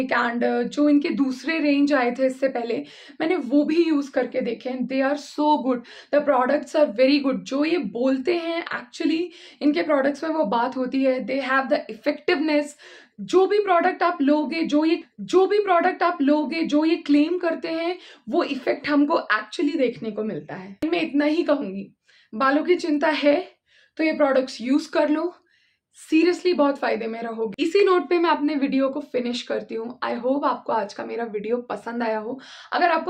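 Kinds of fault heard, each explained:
Stream segment repeated: at 15.01 s the player jumps back and plays the same stretch of programme a second time, so two seconds of sound recur through to 17.01 s. This is the signature of one segment being fetched or queued twice, with a small blip where playback rejoins.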